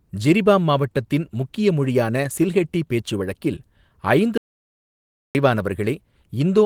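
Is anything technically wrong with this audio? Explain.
Yes. From 4.38 s to 5.35 s there is an audio dropout to silence lasting about 0.97 s. The speech cuts off abruptly into silence with no room tone, then resumes mid-flow. The likely cause is a lost input, such as a disconnected device or failed link, while writing continued. That stretch of speech is gone. The Opus voice compression, running in hybrid fullband mode at 20 kbps, adds only light coding texture.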